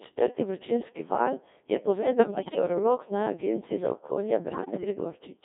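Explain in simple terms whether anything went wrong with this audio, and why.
Something did go wrong. The whole recording has been squeezed through the Codec 2 vocoder, a very low-rate digital radio voice coder. It rebuilds the speech from a few pitch and tone settings instead of keeping the real sound, so everything comes out buzzy, robotic and heavily smeared.

There are also two short bursts of bit errors on digital voice radio, from 2.01 to 2.59 s, right after "četrti vročinski val je", and from 4.52 to 4.84 s. Corrupted data scrambled the coder's settings, so the voice lurches in pitch and loudness and breaks into warbly, bleepy gibberish. The first burst sounds worse than the second.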